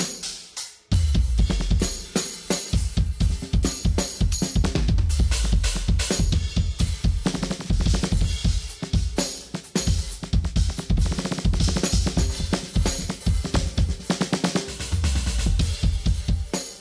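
No technical faults can be heard in the audio.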